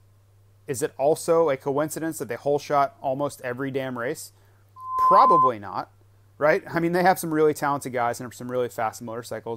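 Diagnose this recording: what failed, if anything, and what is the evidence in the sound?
A 1 kHz tone swells over about a third of a second after "almost every damn race" (4.76 to 5.51 s), about 10 dB above the speech. This is loudspeaker feedback squeal in the analogue path: the microphone's loop through its loudspeaker exceeds unity gain at 1 kHz.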